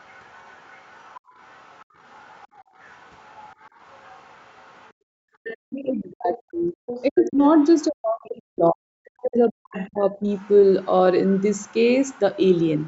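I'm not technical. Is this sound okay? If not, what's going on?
No. A faint second voice runs underneath from 0 to 5.89 s and again from 9.76 s to the end, and it is clearly louder between 6.86 and 8.27 s. This is the other side's voice leaking through. Their voice most likely played from the loudspeaker and wasn't fully removed from the microphone.

Between 4.94 and 5.59 s, the room background briefly vanishes in short dips that add up to about a fifth of a second. This is background gated by the echo canceller, which shut the microphone down hard while the loudspeaker was playing.

From 5.85 to 10.29 s, the main talker keeps fading or dropping out, for roughly three seconds in total. This is speech suppressed in double talk. Both sides were most likely speaking at once, so the echo canceller turned everything down together.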